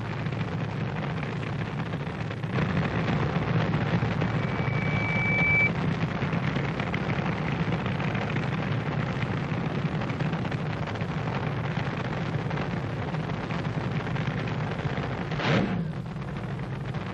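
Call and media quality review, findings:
Single tone at 2.3 kHz swelling into a squeal, 4.21 to 5.70 s, building over roughly a second and a half to about 5 dB above the programme. Loudspeaker feedback squeal: mic re-capturing its own loudspeaker, loop gain above unity at that frequency.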